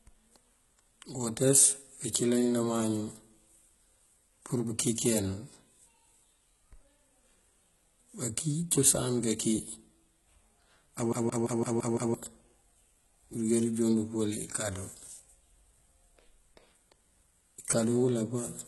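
Speech that carries heavy codec damage for its whole length: the treble is present but sounds synthetic, with s sounds turning gritty, metallic or lispy because the upper harmonics do not line up with the lower ones. That points to HE-AAC compression, likely at a very low rate around 16 kbps, where only the lower spectrum is coded and the top is regenerated from copied lower bands. Unlike a plain low-pass codec, which simply dulls the sound, this keeps the top end but fills it with something that is not the original. From 11.13 to 12.14 s the CD is stuck on one turn: a 170 ms slice repeats six times in a fast, even stutter, with a brief mute at each jump back. That fixed loop length sets it apart from network dropouts or buffer glitches, which repeat or gap irregularly.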